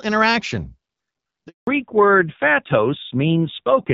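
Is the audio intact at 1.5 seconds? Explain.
No. At 1.5 seconds the call is in a handover gap: while the phone switched from one network to another, no speech frames arrived. From 1.47 to 1.67 s the speech fades out within a few tens of milliseconds and goes silent, and whatever was said in those 200 ms is lost.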